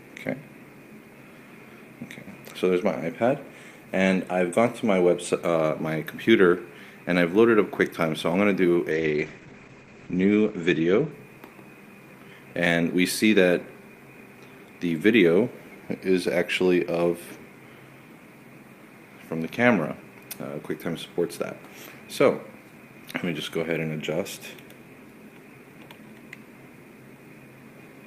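From 8.92 s to 11.65 s there is a call bitrate drop. The top end narrows from about 20 kHz to 8 kHz, and the sound turns coarse and watery, roughest for roughly a second, which fits the encoder falling from around 48 kbps to about 10 kbps before recovering. Unlike a plain low-pass filter, the dullness comes with swirly quantisation grit, and unlike packet loss there are no gaps or clicks.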